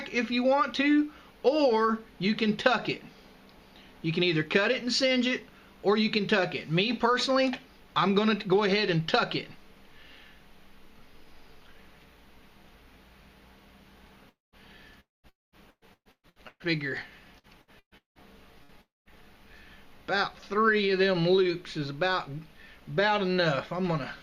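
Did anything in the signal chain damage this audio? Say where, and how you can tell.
Yes, the damage happened in the network. The four long network dropouts at 14.29, 15.00, 15.29 and 18.82 s are likely each a lost quarter second. A brief fading buzz or hiss continues the last sound, then about 0.2 s of silence follows before the audio resumes.

Repeated packet loss (robotic sound) affects 15.70 to 16.65 s and 17.38 to 18.72 s, with five gaps each. The gaps reach 120 ms in the first span and 180 ms in the second. Patching covers over half and about a third of those spans, leaving choppy sound with pieces missing.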